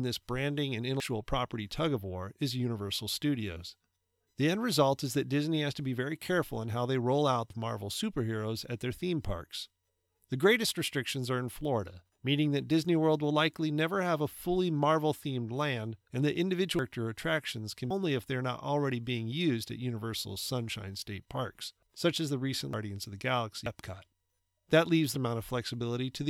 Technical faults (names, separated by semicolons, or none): compressed frames skipped